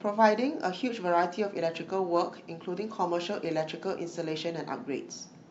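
The clip is speech, and nothing is technically wrong with it.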